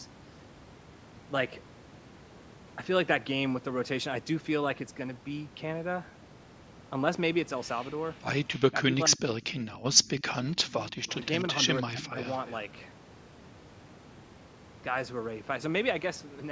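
From 8.55 to 10.22 s, and again at 10.56 to 10.97 s and 11.82 to 12.18 s, the speech dips, briefly near-silent in the first stretch. This is speech suppressed in double talk, likely an echo canceller ducking the talker while the far side speaks; it is level loss rather than an added copy. From 10.19 to 11.41 s and 12.04 to 12.55 s, an echo leak adds a faint copy trailing 295 ms behind, roughly 20 dB down, likely residual loudspeaker echo.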